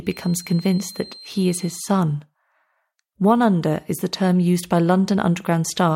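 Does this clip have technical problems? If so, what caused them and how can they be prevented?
Yes. From 0.0 to 2.0 s a thin feedback whistle near 4.2 kHz sits behind the speech, roughly 25 dB below it. The likely cause is the loudspeaker-to-microphone loop running just at the edge of feedback, so that one frequency keeps ringing without building up. Unlike a runaway howl, it never builds into a howl, and unlike a mains hum it is a single high tone rather than a low buzz with harmonics. To prevent it, keep the microphone away from and behind the loudspeakers, lower monitor gain, or notch out the ringing frequency.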